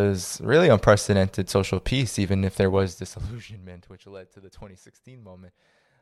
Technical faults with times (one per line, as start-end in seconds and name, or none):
2.70-3.50 zipper noise